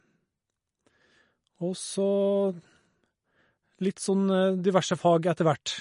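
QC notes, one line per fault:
Throughout: MP3 compression, likely from low-bitrate encoding near 40 kbps; the treble stops dead at 10.6 kHz, and weak frequency lines flicker between frames, giving watery, swirling speech distinct from plain low-pass filtering.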